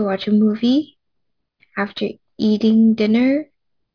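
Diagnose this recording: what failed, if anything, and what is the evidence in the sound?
The sample-rate conversion failed: the audio was downsampled without an anti-aliasing filter, which fits a drop to 11 kHz sampling. Throughout, energy above 5.5 kHz folds back as aliasing, roughly 30 dB below the speech, making sibilants gritty and metallic, with the spectrum running hard to the band edge.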